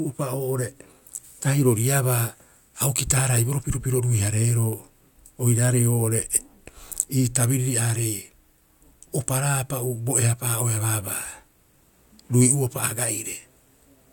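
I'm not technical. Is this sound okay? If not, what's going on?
Yes, this sound is okay, and there's nothing going on with it that needs fixing.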